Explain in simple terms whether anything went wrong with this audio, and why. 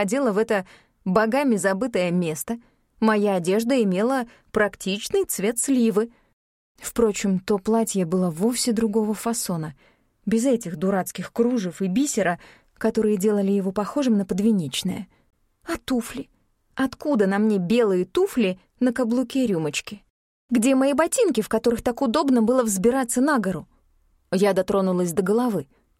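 At 15.30 to 15.33 seconds, the sound drops out completely for about 25 milliseconds. Then it carries on. The gap is very short, like a tiny hiccup. The likely cause is a Bluetooth stall. Wireless interference delayed the data going to the headphones. The headphones ran out of stored audio to play. So playback paused, silent, until the missing data arrived and the sound could continue.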